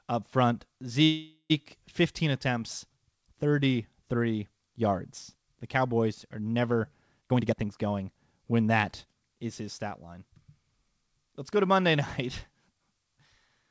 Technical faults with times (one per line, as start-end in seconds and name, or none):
1.04-1.52 call audio freeze
7.21-9.61 jitter buffer speed-up